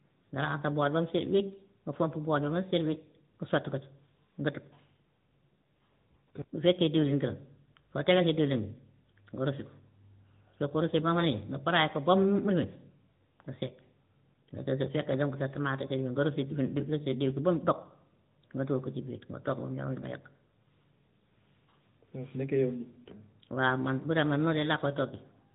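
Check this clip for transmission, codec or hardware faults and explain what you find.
There's one fault here, and it runs the whole way through: AMR narrowband mobile codec damage. Everything above about 3.8 kHz is gone, and the 8 kHz phone-style vocal-tract coding leaves the speech audibly buzzy and synthetic, which fits a mid-rate mode around 10 kbps.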